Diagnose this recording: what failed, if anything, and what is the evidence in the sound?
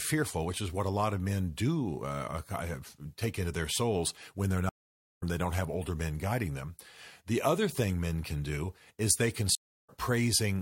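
A stream reconnect at the network stage: after "their souls when they're" the sound goes silent for 0.47 s (4.69–5.23 s), and after "do is they can" for 0.25 s (9.55–9.90 s). Each time a fresh decoder picks up the stream later, skipping some material rather than stalling like a buffer dropout.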